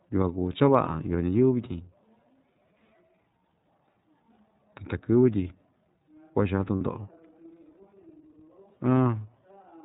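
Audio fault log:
throughout: iLBC codec. Every frame is coded on its own as a narrowband excitation, so the speech has a plainly audible rough, slightly synthetic edge, and nothing above 4 kHz survives. The level of damage fits a rate near 13.33 kbps with 30 ms frames. On a spectrogram the energy stops at a hard ceiling at 4 kHz with an empty band above it. Harmonics look slightly smeared, and the waveform shows mild frame-to-frame roughness.
6.75 to 6.82 s: lost iLBC frames. About 60 ms of audio is missing, which fits two lost 30 ms frames. The decoder fills the gap by repeating the last pitch cycle blended with noise, so a short held, faintly buzzy vowel replaces the sound. On the waveform this shows as near-repeating cycles with added noise. On the spectrogram the harmonic stripes run flat and unchanging, then the normal pattern returns at once because each frame decodes independently.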